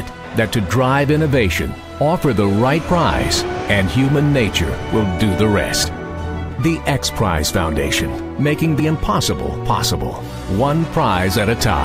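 The sound jumps forward abruptly at 2.89, 5.84 and 8.80 s, each time losing roughly 40 ms with the two sides butted together and no gap. The even spacing of about 3 s points to audio likely missing between chunks at each chunk boundary.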